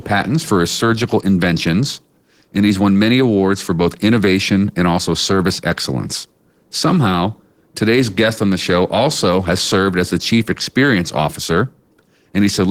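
Opus voice compression runs throughout this speech clip: hybrid SILK-plus-CELT coding at a rate that fits roughly 16 kbps leaves the voice plainly muffled, hoarse and faintly robotic.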